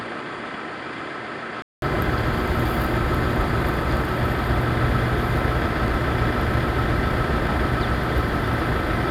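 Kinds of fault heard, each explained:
Input switched to a poorer device: the recording likely started on a weaker input before moving to another, so the first 1.82 s sounds dull, with nothing above 9.9 kHz, about 10 dB quieter, its own noise about 30 dB down, then a 200 ms gap.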